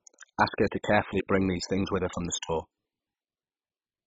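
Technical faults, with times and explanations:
Throughout, MP2 compression: The speech sounds dull and muffled, with nothing above 7.5 kHz. A gurgling, granular roughness sits on the speech. Upper bands seem to drop in and out, so the brightness flickers. The likely cause is MPEG Layer II coding starved of bits, which fits a rate near 16 kbps. The coder splits the sound into sub-bands. Short of bits, it shuts off the top bands and coarsely quantises the rest.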